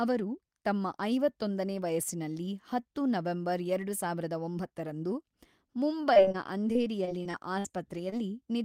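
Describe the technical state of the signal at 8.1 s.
Short concealed packet loss at 8.10–8.14 s: about 20 ms of speech never arrived, so the decoder extended the preceding sound and blended back, leaving a brief smear.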